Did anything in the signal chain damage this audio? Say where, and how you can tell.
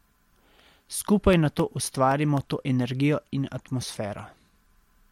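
Yes, CD scratch ticks at playback: five regularly spaced ticks from 1.33 to 2.38 s, just before "to energijo in", each a few milliseconds at most. Their steady once-per-revolution rhythm, unlike random clicks, marks unrecoverable scratched data being interpolated or muted.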